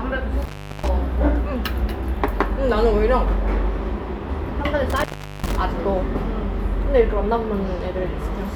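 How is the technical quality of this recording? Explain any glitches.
The recording has two dropouts that sound like an intermittent contact. From 0.42 to 0.89 s, and again from 4.90 to 5.56 s, the sound crackles and then cuts out. Only faint hiss remains for about 360 ms the first time and 390 ms the second, and it returns with more crackle. A loose cable or plug briefly lost its connection, breaking the signal path. The scratchy edges are the contact opening and reclosing.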